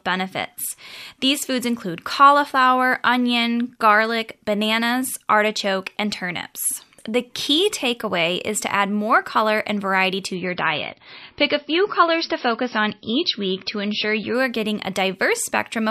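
Speech, with an adaptive stream dropping to a lower bitrate from 10.34 to 14.34 s, after "color and variety to". The quality changes suddenly with no gap. Nothing above 5.8 kHz remains and codec artefacts rise. This fits a switch from 128 kbit/s MP3 to about 24 kbit/s. Full quality returns before "are getting a".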